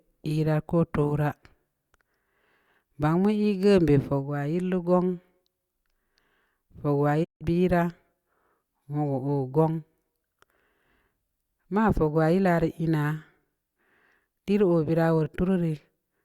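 A digital broadcast dropout at 7.23 to 7.43 s briefly silences the speech. The receiver stopped getting valid frames and muted, fading out over about 20 ms. Roughly 160 ms of sound is simply gone, which fits about five lost frames, before the programme resumes.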